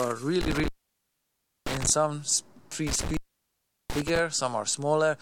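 A loose cable or plug briefly lost connection twice, an intermittent contact fault, between 0.41 and 1.90 s and again between 2.87 and 4.19 s. Each time the sound cuts out with crackle at the edges for about 0.99 s and then 0.73 s, leaving faint hiss.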